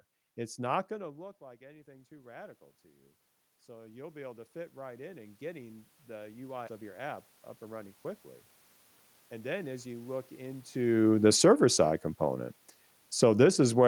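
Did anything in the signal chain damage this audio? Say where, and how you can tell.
Yes. Call processing damaged it. From 0.89 s to 11.98 s the automatic gain rising brings the level up by about 16 dB after the input fell about 24 dB. The room noise swells with the speech, which a talker moving closer would not cause.

A skip ahead in the network or jitter buffer stage occurs at 6.67 to 6.69 s. Roughly 0.7 s of speech is missing, and the two sides are spliced almost directly with no fill. A dropout would instead leave a silent or concealed gap.

The jitter buffer speed-up runs from 9.33 s to 10.01 s at 108% speed, removing under a tenth of a second. The buffer trims pitch-period pieces to cut excess delay, so the speech hurries while its pitch stays put, unlike a resampling or clock-rate error.

Call processing also produces automatic gain falling, by about 7 dB from 10.92 s to 11.62 s and about 6 dB from 13.07 s to 13.83 s. 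The background sinks along with the speech, which separates it from a talker simply leaning back from the microphone.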